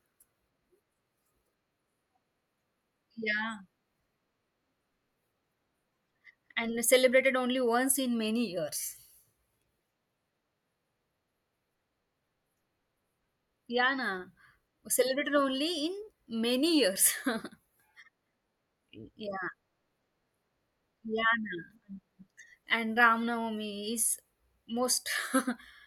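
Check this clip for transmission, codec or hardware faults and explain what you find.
No faults found in this recording.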